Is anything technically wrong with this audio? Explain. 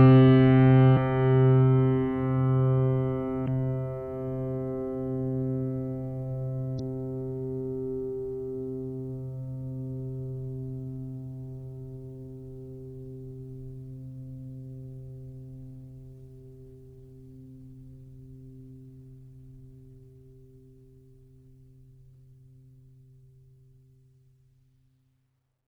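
Yes. Two brief glitches cut into the music, at 3.44 to 3.48 s and 6.76 to 6.80 s. They come from damaged data in a compressed stream: the decoder misreads corrupted frames, loses sync, and searches for the next valid header.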